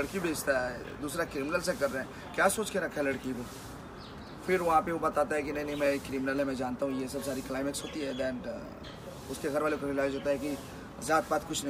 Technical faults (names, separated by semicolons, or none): GSM signalling bursts